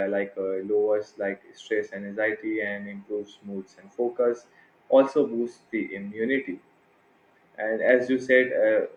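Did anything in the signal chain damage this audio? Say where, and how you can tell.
No, nothing audible in this speech points to damage at any stage of the signal chain.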